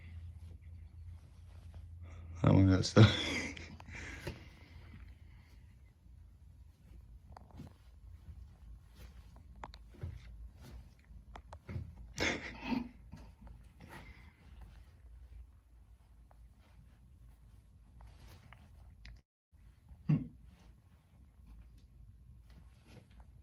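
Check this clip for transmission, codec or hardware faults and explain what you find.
One fault stands out: a long network dropout from 19.19 to 19.54 s. At 19.19 s the last moment of audio carries on as a fading buzz or hiss. It then gives way to near silence for roughly a quarter of a second. The sound returns at 19.54 s, but about 320 ms of material is gone for good. The likely cause is a stall in packet delivery. The receiver stretched what it last had, then ran dry.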